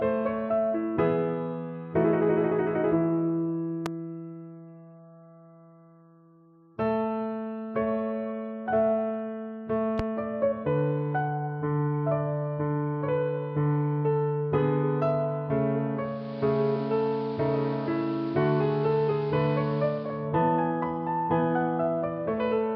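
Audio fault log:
3.86–3.88 s and 9.99–10.02 s: loud pop. Two separate sharp pops, each a single transient about 25 ms long and peaking roughly 15 dB above the surrounding sound, which continues unbroken beneath them. The cause is likely a brief voltage step or pulse entering the signal path, such as a connector being disturbed, a switch, a static discharge or a driver glitch. Downstream circuitry shapes that pulse into the short, hard click-thump heard here.
15.93–20.31 s: digital radio blending to analogue. The receiver lost the digital stream and cross-faded over about 0.49 s to the station's AM broadcast, then faded back at the end of the span. On the AM path the treble is cut back, so the sound turns dull and band-limited. Hiss rises to roughly 25 dB below the signal, and the level falls by about 1 dB.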